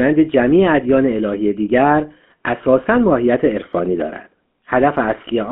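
From the start to the end, the speech has a buzzy, gravelly roughness and a muffled top, with nothing above about 3.5 kHz and thin lows below about 200 Hz. This is the GSM full-rate codec, plainly audible here. It rebuilds the voice from a vocal-tract model excited by a sparse, regularly spaced pulse train, so fine detail in the excitation is lost and replaced by that coarse grain. The sound fits a 13 kbps stream.

Between 3.63 and 3.68 s, the sound briefly breaks into a squawking, gargled burst before settling back. These are GSM bit errors. Bits were flipped on the radio link, and the decoder took wrong filter, pitch or gain values as valid. That bent the spectrum and jolted the level for a moment. The short span points to a few corrupted frames in a row, not a single one.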